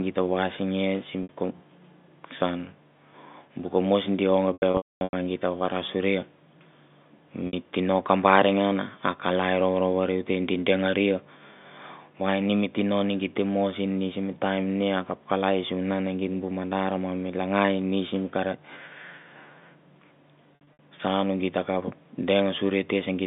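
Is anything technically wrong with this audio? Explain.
Yes. At 1.23 s and 7.47 s the sound briefly holds as a buzzy, frozen tone, each lasting about 60 ms. Between 4.53 and 5.13 s there is a stretch of stuttering holds and fades into silence, with about 450 ms missing and the longest gap 240 ms. Smaller stutters follow at 20.55 to 20.79 s. This is packet loss with pitch repetition: the receiver repeats the last pitch period to fill each gap and fades it out when the gap runs long. Over the telephone-band G.711 line, these fills stand out as the only glitches.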